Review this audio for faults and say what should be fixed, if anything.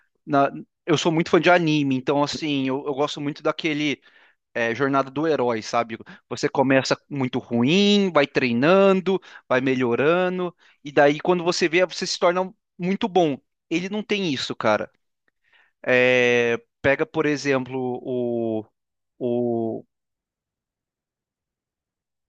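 Nothing here needs fixing; I listened all the way through and didn't hear any faults in the recording.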